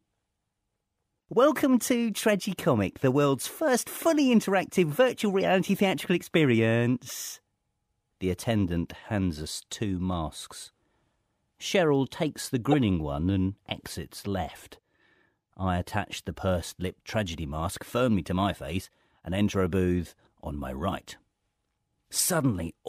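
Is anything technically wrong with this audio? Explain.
Yes. Corrupt frames were decoded in this speech at 5.40–5.45 s after "fully interactive virtual", at 7.08–7.11 s, and at 12.72–12.74 s between "takes the" and "one and exits left". Flipped bits in one or two compressed frames were played anyway, misplacing spectral energy as brief blips peaking around -35, -25 and -10 dBFS.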